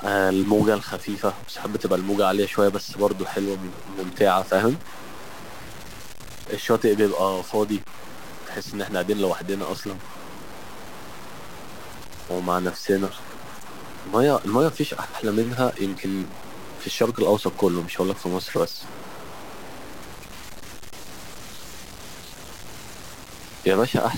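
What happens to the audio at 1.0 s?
At 1.0 s the speech is caught up in a fault that runs through the whole clip: a stuck bit, likely from a damaged data line or converter holding one bit fixed. About half of the samples are pushed off by that bit's weight, about -35 dBFS, following the waveform's shape. The result is a harsh, buzzy distortion over the speech, and because the bit flips with the sign of small values, quiet gaps fill with a steady noise floor.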